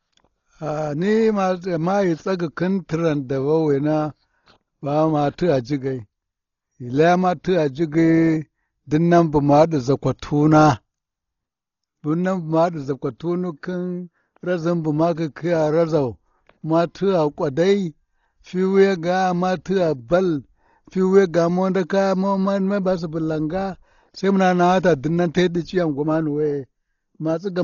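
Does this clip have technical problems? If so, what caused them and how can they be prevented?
Yes. Throughout, the speech sounds dull and heavily damaged, with nothing above 7 kHz and a rough, fluttering noise around voiced tones. This is likely Dolby Digital compression at a bitrate around 32 kbps, where the encoder narrows the band and leaves many frequency lines without mantissa bits, so the decoder fills them with dither noise. On a spectrogram this appears as a hard, flat ceiling at 7 kHz, with speckled, smeared harmonics below it. Encoding at a much higher bitrate would prevent it.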